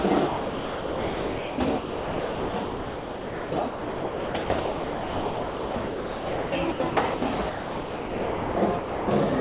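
A voice detector likely switching transmission on and off chopped the sound from 0.28 to 7.22 s and from 7.5 to 9.08 s. Most of each stretch was replaced by comfort noise, through a narrowband call path with nothing above 4 kHz, consistent with G.711 mu-law.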